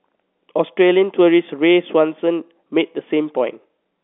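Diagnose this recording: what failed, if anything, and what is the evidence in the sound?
Nothing failed; the telephone-band path works as intended.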